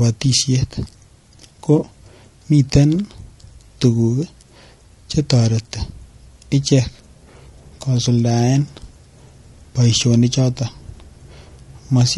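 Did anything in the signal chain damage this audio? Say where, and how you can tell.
Yes. At the codec stage, the speech is rough and grainy throughout, with noise filling the gaps between pitch harmonics and a thin, synthetic top band. This is likely low-delay AAC compression (AAC-ELD), whose short frames resolve harmonics poorly, at a bitrate around 32 kbps.

At the network or transport stage, there is AAC frame loss with concealment from 1.79 to 1.83 s: a brief smeared, noisy patch. About 20 ms of audio is missing, consistent with a single lost frame, which the decoder rebuilt from the previous good spectrum.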